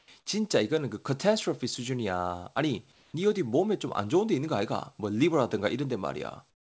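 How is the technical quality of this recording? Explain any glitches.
The speech carries through a call path that leaves nothing above 8 kHz, and two pauses show comfort noise in place of the background. At 2.92 to 3.14 s and 6.50 to 6.61 s the real room sound gives way to smooth, featureless hiss, about 2 dB and then about 13 dB quieter. This likely comes from discontinuous transmission, with the receiver synthesising the noise. Unlike a gate or dropout, the gap is never silent.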